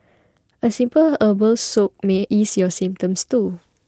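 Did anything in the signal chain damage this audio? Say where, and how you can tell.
No, nothing in the signal chain damaged this speech.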